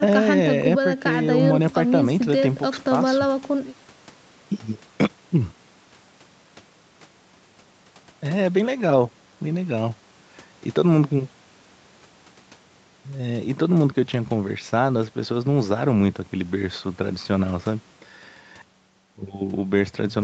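Nothing goes wrong anywhere in this speech recording, which just carries the ordinary character of a call with its top end stopping at 8 kHz, exactly as that kind of call path normally leaves it.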